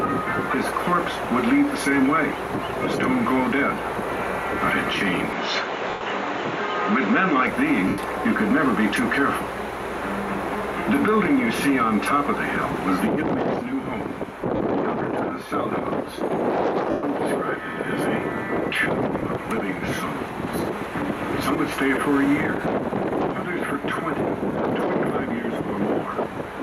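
Input switched to a poorer device, from 5.33 to 7.47 s: the sound abruptly loses everything above 7.4 kHz and turns duller and boxier, then opens up again at 7.47 s. There is no gap at the changeover and no noticeable jump in level, and the new background noise sits very far below the signal. The sudden band-limiting most likely comes from the input moving to a lesser microphone or a headset call profile and then back.

Lost LE Audio frames first occur within that narrowed stretch, from 5.90 to 6.01 s (110 ms), then at 7.88 to 7.98 s (100 ms), 14.56 to 14.60 s (40 ms) and 16.91 to 17.03 s (120 ms). In each gap the LC3 decoder fills in by repeating the last spectrum with randomised phase, so tonal content smears into a hissy wash that fades toward silence in the longer gaps. The durations point to runs of roughly 4 to 12 consecutive 10 ms frames going missing over the Bluetooth link.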